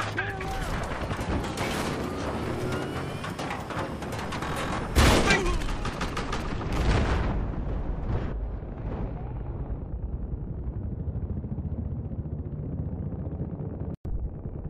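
From 5.61 to 6.42 s, a galloping run of short buzzes cuts in, with a rasping 217 Hz tone inside each burst, sitting roughly 15 dB below the main sound. These are GSM signalling bursts: a nearby 2G phone was exchanging brief control transmissions with the network, and some stage of the audio circuit rectified that radio energy, turning the phone's 217 Hz pulse timing into audible buzz for just under a second.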